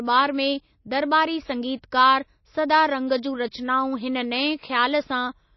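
MP3 compression runs from start to finish of this speech clip. Nothing is heard above 5.8 kHz, so sibilants and breath noise lose their top end and sound dull. The encoder likely ran short of bits, consistent with a low rate of roughly 27 kbps, so it cut the treble at a fixed point and zeroed the weaker frequency lines. Those lines flicker on and off between frames, giving a plainly audible watery, swirling texture with smeared consonant onsets.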